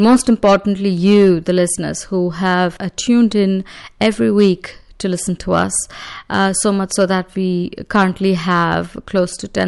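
A recording of speech, with no technical fault audible anywhere in it. There is nothing here that needs a time, a value or a cause attached to it.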